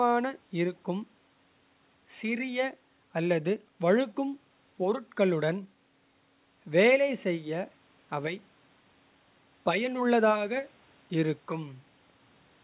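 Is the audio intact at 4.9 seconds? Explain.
Yes, the audio is intact at 4.9 seconds, with only the faint room noise, about 39 dB below the speech, and the narrowband call-codec sound with nothing above 4 kHz present there.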